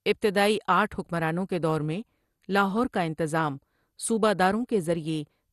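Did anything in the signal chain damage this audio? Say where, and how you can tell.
Yes, at the codec stage: the speech is dull and gurgling throughout, with nothing above about 12.2 kHz. This is likely MP2 compression at a low bitrate, around 64 kbps, switching off upper sub-bands.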